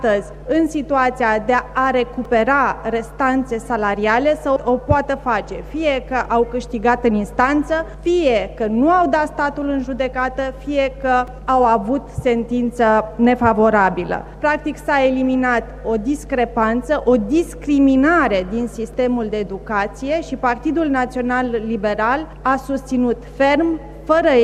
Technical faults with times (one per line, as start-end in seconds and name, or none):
2.25 repeated buffer
11.27 repeated buffer
18.93 repeated buffer